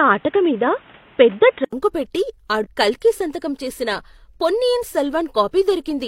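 From the start to 1.73 s the speech is dull and boxy, with nothing above 3.8 kHz, a noise floor roughly 30 dB under the speech, and a level a few decibels different from what follows. At 1.73 s comes a silence of about 80 ms, and then the sound opens up. The likely cause is the input switched to a poorer device, a narrowband microphone or headset call profile, before the system moved to a fuller one.

From 2.60 to 2.67 s, just before "కల్కి సంతకం", a brief chirp, squawk, click or short hole cuts in. This is damaged data in a compressed stream. Corrupted bytes left the decoder unable to read those frames, so it produced garbled output, lost sync, and searched for the next valid frame header before normal decoding resumed.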